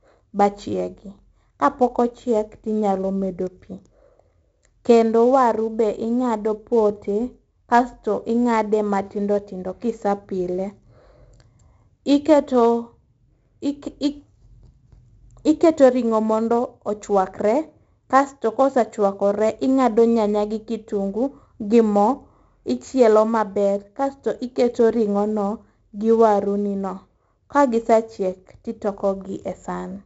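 Throughout, 4-bit ADPCM compression's coarse steps leave heavy, gritty hiss on loud speech and rough attacks. Nothing lies above 7.7 kHz, fitting 64 kbps.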